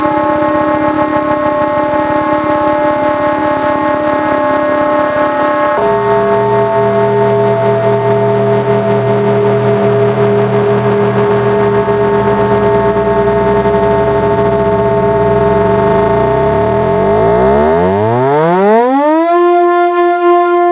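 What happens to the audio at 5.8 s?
At 5.8 s the sound is caught in gain pumping, which runs through the whole clip rather than starting there. The level dips under each loud sound and climbs back afterwards, a swing of around 5 dB, so loud and soft moments sit closer together. The likely cause is input gain set far too high with a fast limiter or compressor clamping it. Unlike a noise gate, nothing cuts to silence; the level only breathes. The G.711 call path's 4 kHz ceiling is separate from this fault.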